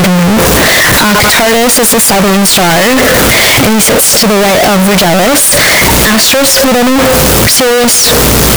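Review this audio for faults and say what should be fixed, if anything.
Throughout the speech there is a loud, harsh roar, and the pauses are as loud as the talking. The likely cause is signed and unsigned mixed up on what sound like 16-bit samples: the top bit flips, so every zero crossing leaps full scale. On a waveform this looks like a solid, dense block, and a spectrogram shows broadband energy filling every gap. To prevent it, declare the sample format explicitly and check that it matches at every read and write.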